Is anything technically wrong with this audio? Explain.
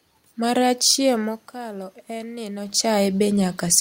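Yes. From 1.17 to 3.10 s there is automatic gain rising. The input level dropped by about 11 dB, soon after the talker moved back from the microphone at around 1 second, and the gain control slowly added about 4 dB to compensate. The room noise swells along with the voice. On a waveform the envelope broadens gradually over those two seconds. On a spectrogram the noise floor brightens evenly across all frequencies.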